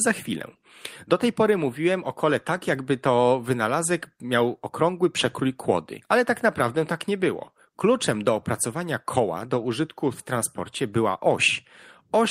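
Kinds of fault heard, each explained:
No faults detected in this speech recording.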